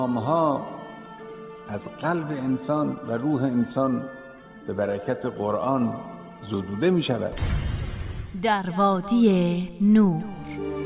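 Nothing in the audio stood out as a technical problem on listening.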